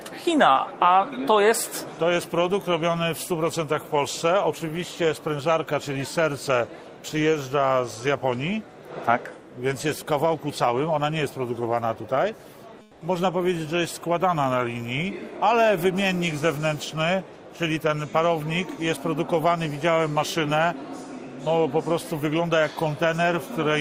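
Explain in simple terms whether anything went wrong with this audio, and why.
At 12.85 to 12.97 s, about 120 ms, the real background is replaced by comfort noise. It's a flat, featureless hiss, quieter, likely from the sender pausing transmission. It differs from a dropout because the gap is filled with noise rather than silence.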